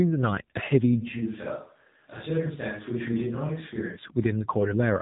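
Throughout, the speech carries AMR narrowband mobile codec damage. Everything above 3.8 kHz is missing, so a spectrogram shows a hard, flat ceiling with nothing above it. The buzzy, synthetic quality of the reconstructed voice points to a low bitrate, around 7.4 kbps.

From 1.03 s to 3.95 s the sound suddenly turns roomy and hollow, with thinner bass, and it snaps back just as abruptly. This is likely a switch to a distant microphone. The waveform steps down by about 5 dB for that stretch, and a spectrogram shows a raised noise floor about 35 dB below the speech.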